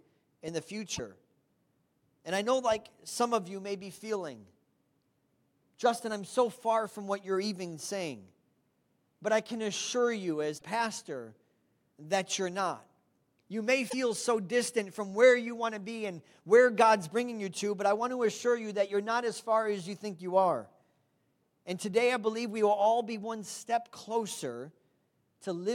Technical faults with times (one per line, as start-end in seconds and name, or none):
0.95-1.00 broken MP3 bit reservoir
10.57-10.62 broken MP3 bit reservoir
13.89-13.94 broken MP3 bit reservoir